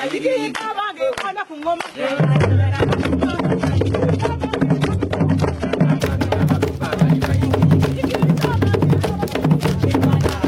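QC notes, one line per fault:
0.0 to 6.0 s, adaptive stream starting at a low bitrate: the opening stretch sounds dull and a bit papery, with nothing above about 11.8 kHz and the top end smeared and synthetic, which fits a low-rate HE-AAC version at around 16 kbit/s. The player picked that to get going fast, then switched up once it had measured the connection. At 6.0 s the treble snaps back with no gap, pointing to a step up to something like AAC-LC at 96 kbit/s.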